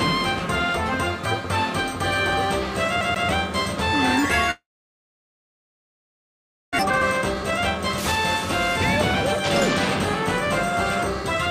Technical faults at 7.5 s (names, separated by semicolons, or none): jitter buffer speed-up